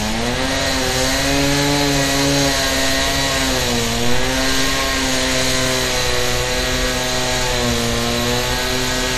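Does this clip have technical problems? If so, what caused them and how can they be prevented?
Yes: throughout, the audio sounds watery and swirly with nothing above 15 kHz, likely MP3 compression at a bitrate that points to about 64 kbps. Prevent it by encoding at a higher bitrate or keeping a lossless copy.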